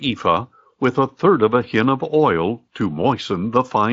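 A short speech recording with no technical fault to point to. It carries the light, slightly grainy texture of Speex coding at a fairly high quality setting, with no hoarse or robotic quality.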